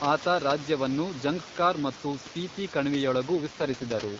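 AMR rate drop from 3.36 s to the end: with no gap, the speech turns raspy and synthetic, which fits the codec stepping down from 12.65 to 6.6 kbit/s.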